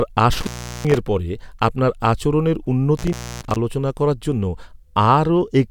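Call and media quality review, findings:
Intermittent contact, speech: dropouts 0.33–0.98 s (line open 380 ms, before "পরে আপনার আচরণের") and 2.97–3.56 s (open 286 ms, before "আলোচনা করার জন্য"). Crackle at the edges, faint hiss in the gaps. Probable component: loose cable or plug momentarily breaking the signal path.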